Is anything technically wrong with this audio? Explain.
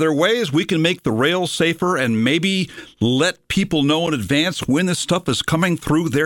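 Yes. At 4.07 s the speech drops out for a hard-edged moment of silence, about 7.8 ms, a brief click-like hole. This is a gap between stream segments: the timestamps of adjacent segments, likely meeting at a boundary near 4 s, leave a small space that the player fills with silence. No speech is lost.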